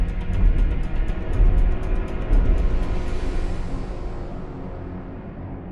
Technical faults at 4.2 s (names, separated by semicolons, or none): wrong sample rate